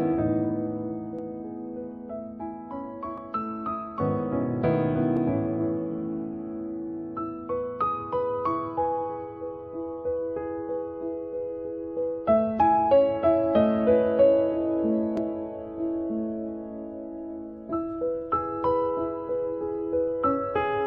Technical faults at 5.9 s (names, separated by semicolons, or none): none